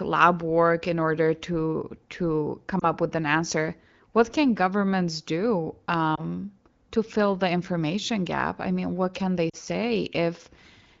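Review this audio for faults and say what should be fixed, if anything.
Lost AMR speech frames: radio errors failed frame checksums, so the decoder reused the previous pitch and vocal tract settings at falling gain. The result is a brief dip or warble at 2.79 to 2.87 s, between "in order to to" and "with an answer", and at 6.15 to 6.23 s, after "can governments do"; at 9.49 to 9.56 s, after "mean what can they", two frames in a row were lost and the sound drops toward near silence. The first two each fit about 20 ms of lost audio, and the third about 40 ms. Stronger channel coding, or a better radio link with fewer bit errors, would keep these frames intact.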